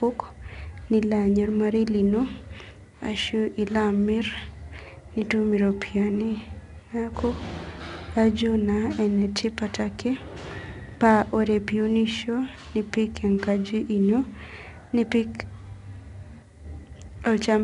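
Throughout the speech, the signal has passed through 4-bit ADPCM compression. Each sample is stored only as a coarse 4-bit step from a predicted value, with the step size adapting as the signal changes. The leftover error rides along with the level, so every loud syllable carries a gritty hiss, and sudden onsets distort as the step size lags behind. The content stops at about 10.7 kHz, and the bitrate points to a low sample rate, near 22 kHz.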